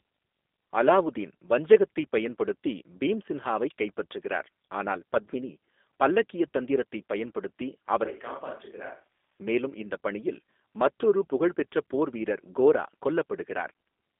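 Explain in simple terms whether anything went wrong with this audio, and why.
The whole clip went through the G.729 codec, a phone-call squeezer, so it sounds thin, slightly rough and robotic, with nothing above about 3.7 kHz. From 8.05 to 9.39 s, right after "பத்மினி பல்லக்கியத் தந்திரத்தைப் பயன்படுத்தி", the voice suddenly goes quieter, hollow and roomy until "மேலும் இந்த பணியில் மற்றொரு". That's likely a switch to a distant microphone.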